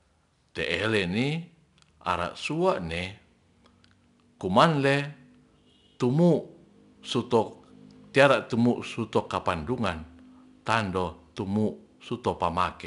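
Throughout the speech, 4-bit ADPCM compression is plainly audible: each sample is coded as a coarse step from a prediction, so a gritty hiss rides on louder passages and sharp onsets smear. Nothing reaches above 10.7 kHz, which fits a stream of around 89 kbps.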